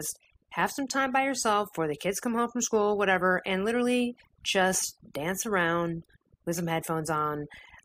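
Right from the start and all the way through, you can hear overdone noise removal on this speech. The denoiser was pushed too hard, so any frequency band sitting close to its idea of the noise floor gets pulled way down or shut off, and the softer parts of the voice get caught in that too. What's left between phrases is near-silence with little twinkly specks.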